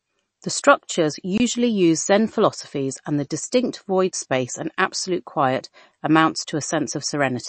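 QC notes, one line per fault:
throughout: MP3 compression, plainly audible. Nothing survives above about 8.3 kHz, and the remaining band sounds watery and swirly, the kind of damage that fits a low bitrate around 35 kbps, where the encoder likely ran short of bits, so it dropped the treble and let weak frequency lines flicker between frames, smearing attacks and s sounds.
1.38–1.40 s: block of digital silence. The audio cuts to silence for about 23 ms and returns with no fade, and the gap reads as a short hole, which fits a 1024-sample output buffer left unfilled in time.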